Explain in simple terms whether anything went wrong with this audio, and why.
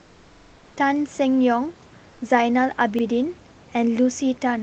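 Comfort noise in place of the background, from 0.0 to 0.76 s and again from 2.10 to 2.20 s: in these pauses the real room sound gives way to a smooth, featureless hiss, slightly quieter. Likely the sending side stopped transmitting when it heard no speech, so the receiver filled the gap with synthetic noise.

Repeated buffer, from 0.34 to 0.51 s and briefly at 2.99 to 3.03 s: a short chunk of about 43 ms plays again, four extra times in the first case and once in the second. New audio arrived late, so the device replayed its last piece, heard as a stutter.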